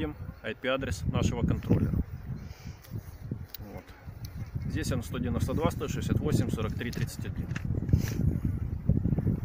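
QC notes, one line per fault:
Nothing to flag here; I listened all the way and didn't catch a single problem worth logging.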